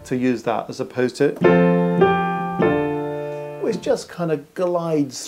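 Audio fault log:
No technical faults can be heard anywhere in the recording, so there is nothing to log.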